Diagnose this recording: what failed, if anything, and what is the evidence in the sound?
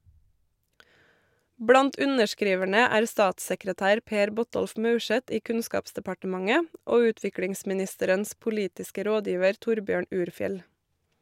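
A single sharp click at 2.62 s marks dropped samples. Under a millisecond vanished, so the waveform jumps. Likely a driver or buffer hiccup.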